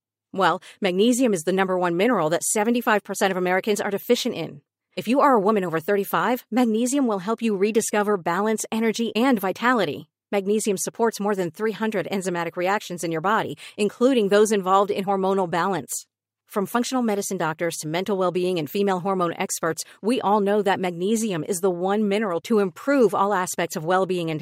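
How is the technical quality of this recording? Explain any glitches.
Nothing stood out on listening; the recording held up technically with no glitch to explain.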